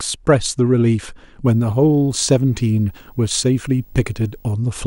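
From 1.45 s to 4.52 s the speech carries video or display buzz: a screen or video cable coupling into the audio path, giving a 50 Hz field-rate buzz with hash above it and a faint 15.6 kHz line tone, well below the speech. A spectrogram shows evenly spaced harmonic lines plus a thin steady stripe near 15.6 kHz.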